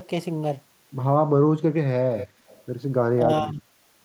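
At 2.11 to 2.28 s and again at 2.47 to 2.62 s, a faint copy of the speech returns 236 ms late, first about 15 dB down, then barely audible. This is an echo leak, likely from a loudspeaker echo canceller letting residue through. From 3.18 to 3.62 s the speech dips by a few decibels, in pieces totalling about 0.3 s. This is speech suppressed in double talk, likely the canceller mistaking overlapping talk for echo.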